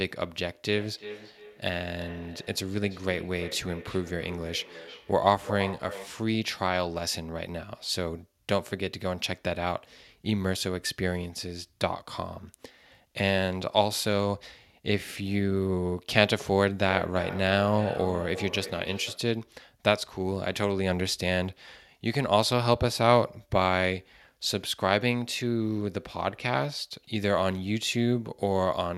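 Speech with feedback echo between two devices from 0.66 to 6.29 s and 16.89 to 19.33 s: each word returns about 300 ms later, peaking at about −13 dB and −11 dB respectively, thinner and ringing, unlike smooth room reverb.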